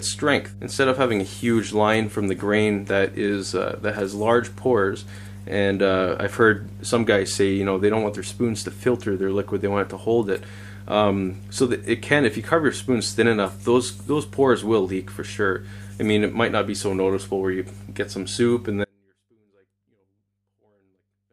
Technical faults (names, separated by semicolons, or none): mains hum; audio dropout to a faint residue